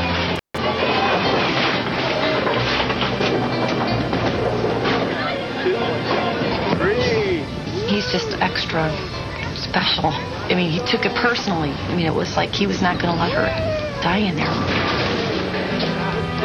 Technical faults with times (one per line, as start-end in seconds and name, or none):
0.36-0.58 intermittent contact